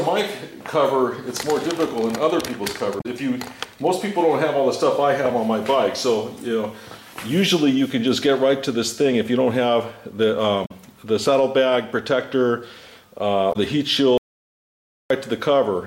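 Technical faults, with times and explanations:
2.97–3.06 s, 10.62–10.71 s and 13.49–13.56 s: damaged data in a compressed stream. Each event is a brief chirp or blip lasting 70 to 100 ms, where corrupted bytes make the decoder misread frames, lose sync and hunt for the next valid header.
14.18–15.10 s: audio dropout to silence. The sound cuts out abruptly for about 0.93 s into silence with no room tone, then resumes mid-flow. This is likely a lost input while the recorder kept writing silence, so that stretch is gone.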